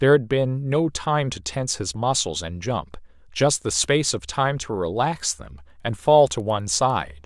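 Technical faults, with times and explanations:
4.9 s to 7.26 s, resampler restarted on every block: a steady train of ticks at 10 Hz, one every 100 ms, rides on the speech from 4.9 s to the end. The pattern fits a downward conversion, apparently 48 kHz to 24 kHz, run on each 100 ms block in isolation. With no memory of the neighbouring samples, the filter sees silence or mismatched data at each block edge and leaves a small error there. The ticks track the signal and drop out in pauses.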